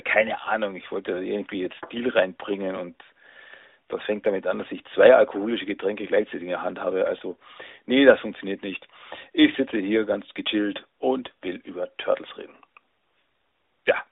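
At 10.88 to 10.92 s, between "sitze hier ganz gechillt" and "und will", lost AMR speech frames leave 40 ms, consistent with two 20 ms frames, filled by the decoder repeating the last good pitch and vocal tract settings at falling gain. The speech briefly smears and dips. A spectrogram shows flat, fading harmonics; the waveform envelope shrinks.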